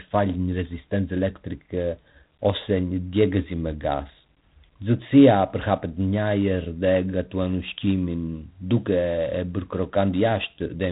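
From start to finish, the speech passes through G.726 ADPCM coding. Each sample is sent as a small difference from a predicted value, and here the damage fits roughly 3 bits a sample, or 24 kbit/s. That coarse step size leaves plainly audible quantisation noise. It is a harsh, rasping hiss that rises and falls with the speech level. Nothing is heard above about 3.9 kHz, so the speech sounds narrow, like a telephone line.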